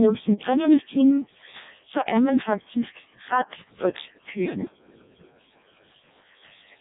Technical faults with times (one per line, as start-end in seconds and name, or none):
0.00-6.80 Codec 2 vocoder